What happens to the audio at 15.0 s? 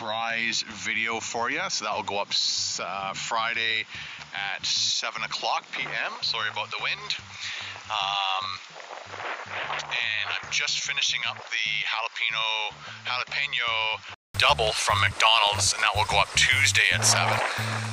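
Regular ticks every 0.1 s, from 14.47 to 17.87 s: periodic USB or driver dropouts, where a blocked bus skips a tiny sliver each time.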